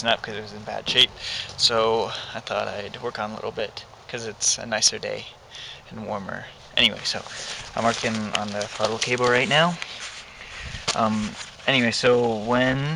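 No technical faults can be heard anywhere in the audio. There is no moment that needs a time marker or a repair.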